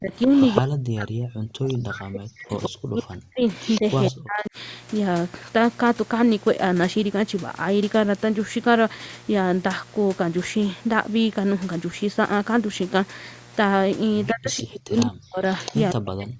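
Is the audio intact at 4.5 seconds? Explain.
No. From 0.00 to 4.56 s, speech suppressed in double talk likely occurs: the echo canceller, with both sides talking at once, cannot tell its own talker from loudspeaker echo and turns both down. The speech dips by as much as around 40 dB, dulls or drops out in pieces for roughly three seconds in total. A 60 Hz mains buzz also runs through this moment: switching spikes from a dimmer, rectifier or unshielded line enter twice per cycle, spreading harmonics upward and leaving a steady, raspy buzz about 25 dB below the speech.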